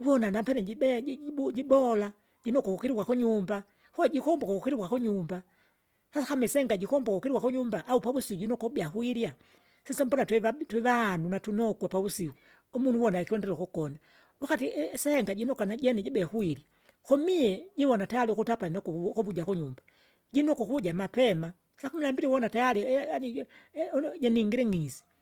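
Speech in this clip has a plainly audible grainy, rough texture from start to finish. Tonal parts of the sound turn noisy rather than swirly, while the bandwidth stays full, with content reaching up to about 20.2 kHz. The likely cause is Opus compression in its music (CELT) mode, which fits a bitrate around 24 kbps: short of bits, the encoder keeps each band's energy but fills the detail with folded copies or noise.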